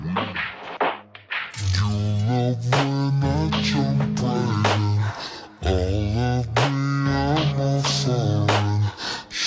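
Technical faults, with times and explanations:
Throughout, wrong sample rate: everything plays at half speed and a full octave lower, consistent with 32 kHz audio read at 16 kHz; pitch and tempo drop together, unlike pitch-shifting.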